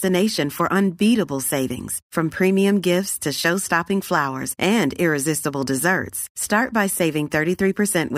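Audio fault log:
No technical faults can be heard anywhere in the speech recording; the signal holds steady and continuous throughout.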